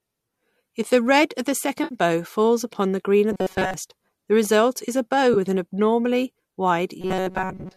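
AAC frame loss with concealment at 1.84 to 1.95 s, after "the red of the": about 70 ms of missing frames patched from the last good spectrum, leaving a smeared, noisy gap before "bow falls upon the".

Robotic sound from repeated short buffers at 3.32 to 3.74 s, after "upon the green of": a rigid metallic buzz at 188 Hz, likely from a roughly 5 ms stretch replayed in place of most of the real audio, until "the result is a".

AAC frame loss with concealment again at 5.34 to 5.37 s, after "result is a bow": a brief 20 ms concealed dropout, a short phasey smear before "with an abnormally".

Robotic sound from repeated short buffers returns from 7.01 s to the end, with the same 188 Hz buzz, likely from short repeated buffers replacing most of the audio, over a light grain likely from low-delay AAC compression.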